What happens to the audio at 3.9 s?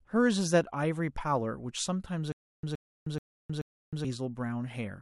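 At 3.9 s the speech is caught in a stutter with silent gaps running from 2.32 s to 4.05 s. A fragment of about 0.12 s plays, then dead digital silence of about 0.31 s follows, and the cycle repeats four times at a steady 0.43 s period. The likely cause is a stalled stream re-playing its last buffered fragment at each retry before running empty, so the speech that belonged in those gaps is gone. Unlike a plain dropout, the same burst keeps returning, and unlike a seamless loop, true silence separates each repeat.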